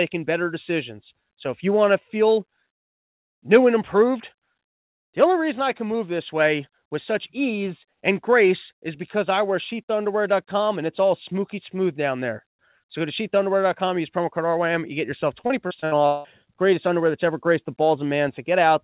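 Repeated packet loss (robotic sound) hits this speech clip from 15.41 to 16.27 s, right after "you get yourself." Packets keep going missing or arriving late, and each hole is papered over by stretching the previous sound before the next gap arrives. Nearly half of that stretch is concealed rather than real audio, with the longest gap at 179 ms, so the passage turns choppy with pieces missing. The whole clip is band-limited with nothing above 4 kHz, which fits a 64 kbps G.711 mu-law call path.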